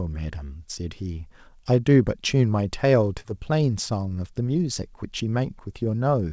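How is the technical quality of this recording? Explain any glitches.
The recording has one glitch. At 3.20 to 3.26 s, short concealed packet loss: about 40 ms of audio arrived too late, so the receiver extended the preceding sound and blended back, leaving a brief smear. The call path's band limit is audible too, with nothing above 8 kHz, which fits G.722 at 64 kbps.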